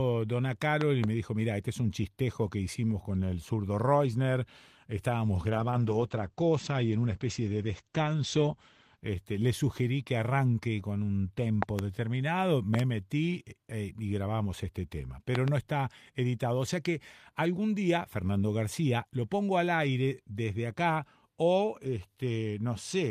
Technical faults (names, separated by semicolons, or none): loud pop; call bitrate drop